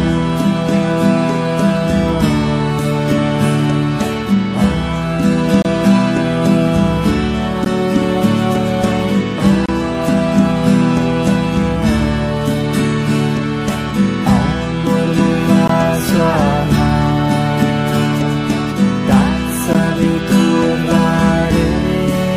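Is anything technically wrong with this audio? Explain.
Yes, there's a gap between stream segments, five times: 5.62–5.65 s, 7.65 s, 9.66–9.69 s, 15.68 s and 19.73 s. The 2 s segments' timestamps don't quite meet, so the player pads with silence: hard-edged holes of 13 to 28 ms, nothing lost.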